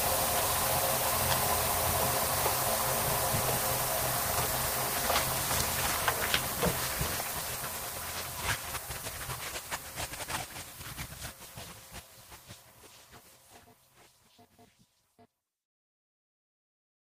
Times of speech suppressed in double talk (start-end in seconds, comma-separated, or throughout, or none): none